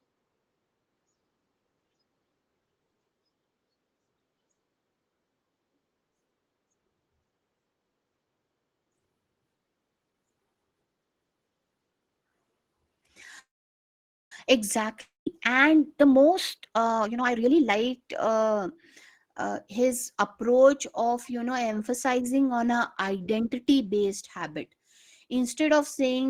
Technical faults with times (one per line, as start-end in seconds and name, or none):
13.39-14.32 call audio freeze
15.01-15.27 long network dropout
15.87-18.75 jitter buffer speed-up